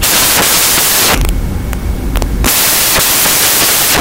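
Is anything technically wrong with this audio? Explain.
Yes. From start to end, the speech comes with loud, harsh broadband noise. The samples are built from the wrong bytes. Each value is assembled misaligned or in swapped order, so the fast-changing low bits dominate.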